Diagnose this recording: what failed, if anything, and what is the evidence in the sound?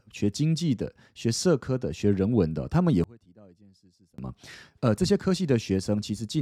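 From 3.04 to 4.18 s the speech collapses by about 30 dB to a faint residue, then returns at full level. That points to one channel inverted, likely a polarity flip in the analogue wiring or an interface leg, heard here through a mono sum. Material common to both channels cancels, so the centred voice and its low end nearly vanish and only the small left-right difference survives. A dropout or mute would leave true silence, not this faint ghost.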